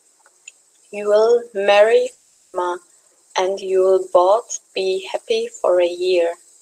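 From 2.11 to 2.56 s the speech breaks off and, for about 0.42 s, is replaced by a smeared, buzzy continuation of the last sound that decays without ever reaching true silence. The speech then resumes further on, with that stretch simply gone. This is likely a long network dropout, with the receiver filling the gap by extending the last sound. It differs from a brief packet loss because the filler runs long enough to audibly fade and the missing speech never returns.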